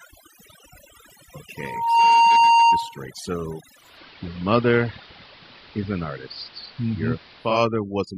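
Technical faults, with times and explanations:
Throughout: overdone noise removal. The noise reducer is pushed far too hard, so any frequency band sitting near its noise estimate gets pulled right down or shut off. That leaves the gaps between phrases close to dead silent apart from little twinkling specks, and because the quieter parts of the speech fall under the same threshold, they get stripped too.
3.73 to 7.65 s: digital radio blending to analogue. The receiver loses its digital stream and cross-fades over about 270 ms to the AM broadcast of the same station, then back again near the end. On the AM side the treble is cut, so the speech turns duller, and a hiss creeps in, roughly 25 dB under the signal. The level shift is small, only about 1 dB, so the treble loss and the hiss are what give it away.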